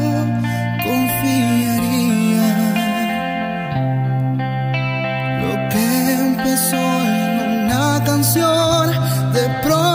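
Nothing in the audio stood out as a technical fault on listening.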